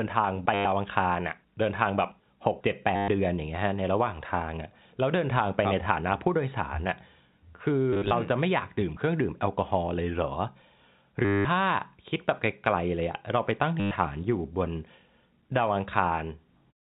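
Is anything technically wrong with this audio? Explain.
Yes, there's packet loss with the last packet repeated, at 0.54–0.65, 2.96–3.08, 7.93–8.11 (scattered bits, longest run 50 ms), 11.25–11.45 and 13.8–13.91 s. The receiver keeps replaying the last packet, so the runs buzz around 100 Hz, which fits 10 ms packets. You hear a short robotic stutter, over the narrow telephone band of the G.711 coding.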